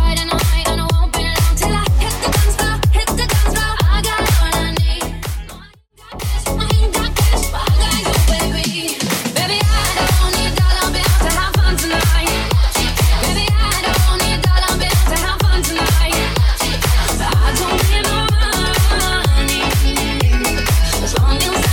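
Clock drift buffer slips run from 0.53 s to 21.53 s: a click recurs every 0.6 s while there is sound, around forty in all. The steady spacing likely comes from two devices on independent clocks drifting apart by a few hundred parts per million, so the buffer between them slowly fills or drains until a block of just a handful of samples is dropped or repeated, leaving a tiny discontinuity each time.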